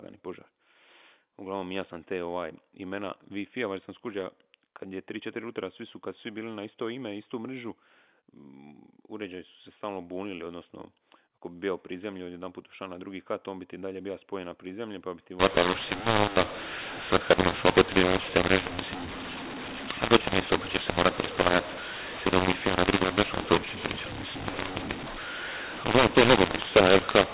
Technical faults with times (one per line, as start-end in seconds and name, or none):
15.40-27.34 mu-law and A-law mixed up